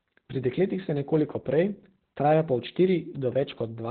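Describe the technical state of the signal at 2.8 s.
Opus voice compression is present at 2.8 s, as throughout the clip. The linear-prediction coder cuts off above 4.4 kHz, consistent with about 8 kbps, leaving the speech muffled and hoarse.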